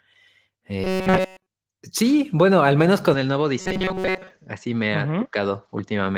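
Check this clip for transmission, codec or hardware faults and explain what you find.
Two faults show up in this speech clip: a repeated-buffer robotic buzz that occurs twice, and a switch to a poorer input device partway through.

Robotic sound from repeated short buffers, 0.84 to 1.47 s (just before "sí bueno al menos") and 3.60 to 4.30 s: new audio likely arrived too late, so the playback looped a tiny slice of what it already had. The buzz sits at 188 Hz, which fits a slice about 5.3 ms long. In the first stretch essentially everything is replaced. In the second, most of it is. The speech becomes a fixed-pitch metallic drone that only loosely follows the syllables.

Input switched to a poorer device, from 3.14 s to the end, right after "sí bueno al menos": the recording likely changed to a lower-grade microphone or a headset call path with no gap at the changeover. The speech turns duller and boxier. 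It also drops by roughly 5 dB, and a faint new noise floor appears around 50 dB below the speech. The Opus coding under all this adds only light damage.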